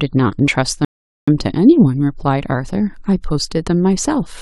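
A rebuffering stall at 0.85 s halts the speech in silence until 1.28 s, about 0.43 s added, because playback outran the downloaded audio; it then resumes exactly where it stopped.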